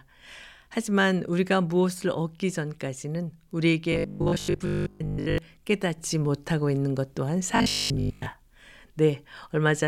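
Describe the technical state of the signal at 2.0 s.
At 2.0 s the speech signal is intact, with no audible fault at that moment.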